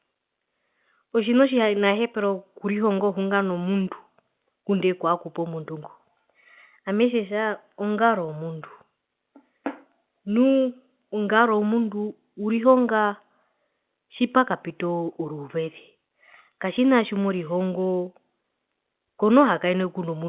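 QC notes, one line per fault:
No faults are present; the speech is carried over normal mu-law G.711 telephone coding at 8 kHz, so the band stops at 4 kHz and a faint quantisation hiss rises and falls with the signal level, as that format always gives.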